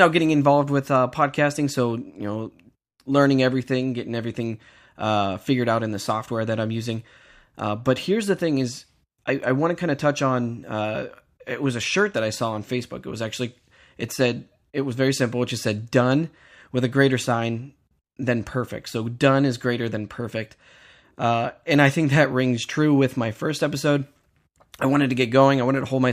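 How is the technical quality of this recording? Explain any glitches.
The technical quality of this recording is good, and there are no glitches to explain.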